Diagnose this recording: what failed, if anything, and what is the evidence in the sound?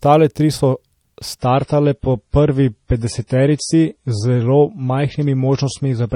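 Network: from 1.39 s, adaptive stream at a lower bitrate; treble abruptly cut above 10.5 kHz, artefacts rise, which fits MP3 dropping from 128 to 32 kbit/s.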